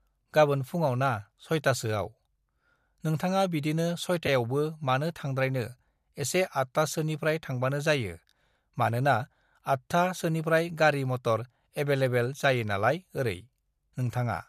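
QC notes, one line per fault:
4.27 s, AAC frame loss with concealment: a single brief smeared, noisy blip of about 10 ms, which fits one low-delay AAC frame going missing. Rather than leaving a gap, the decoder rebuilds that slice from the last good spectrum, so the hole is heard as a momentary phasey smudge instead of a dropout. The surrounding low-delay AAC compression, likely AAC-ELD, is light.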